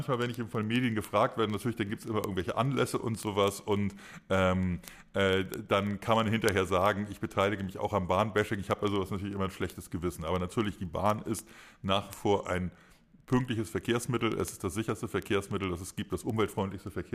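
Steady ticks every 40 ms or so, 0.14 to 17.12 s: word clock ticks, an unlocked receiving clock slipping one sample per tick.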